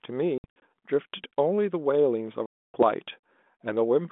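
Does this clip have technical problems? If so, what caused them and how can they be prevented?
Yes. Packet loss on an ADPCM call drops speech from 0.38 to 0.62 s in several short holes, the longest about 60 ms. It also drops about 280 ms of speech between 2.46 and 2.83 s. The gaps are filled with silence. Afterwards the decoder's predictor and step size disagree with the sender's, so speech returns slightly distorted. A jitter buffer with loss concealment would prevent this.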